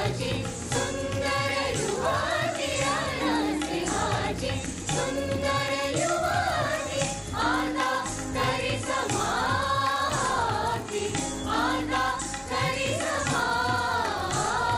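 The resampler restarted on every block throughout the clip: each 20 ms block was converted on its own, without the neighbouring samples from adjacent blocks, which fits an upsampling from 24 kHz to 48 kHz. Each block edge therefore carries a small discontinuity. Because the blocks are so short, the errors fuse into a steady buzz at 50 Hz that sits under the sound whenever there is signal and drops away in the gaps.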